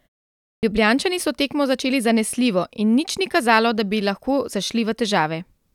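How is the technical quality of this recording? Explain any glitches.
One glitch stands out, a clipped start after a pause at 0.58 to 0.63 s. The opening 0.58 s is fully muted, and the output device had gone idle during that stretch. It takes about 49 ms to wake, so the speech bursts in abruptly without its first sounds. A waveform shows a hard vertical onset, and a spectrogram shows energy switching on without any gradual lead-in.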